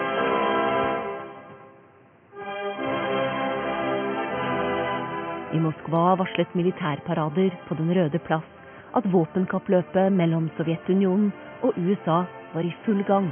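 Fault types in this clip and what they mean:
No audible faults detected.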